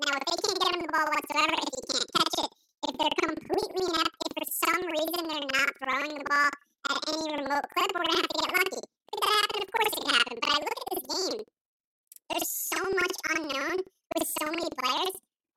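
Throughout this speech clip the voice sits a full octave (12 semitones) above its natural pitch, yet the pace of delivery is normal, and a flutter of about 11.7 Hz runs under every syllable. This is planar audio read as interleaved. Each block of about 85 ms, which fits a 4096-sample block, stores all left samples and then all right, but it is read as alternating pairs. Each half therefore plays at double speed, left then right, which doubles the pitch and produces the chop at the block rate.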